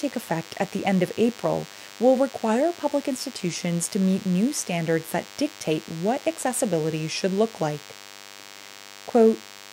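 DECT cordless phone buzz runs through the whole clip: a nearby DECT handset or base station fires a radio burst every 10 ms, which the audio circuitry rectifies into a thin, steady buzz at 100 Hz, rich in harmonics and sitting roughly 20 dB below the sound.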